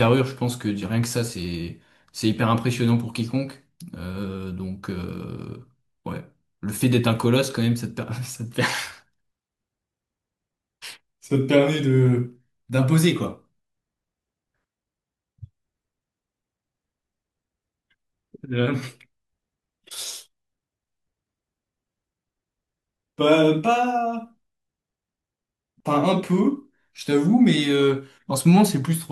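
Nothing goes wrong anywhere in this speech recording, so there's no fault to point to at any moment.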